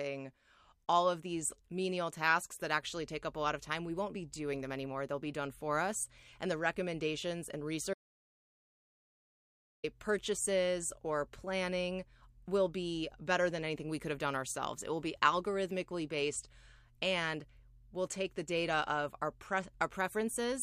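From 7.94 to 9.84 s the speech cuts to dead silence, an audio dropout to silence, likely from lost input; the waveform goes flat and the spectrogram shows a blank gap of about 1.9 s.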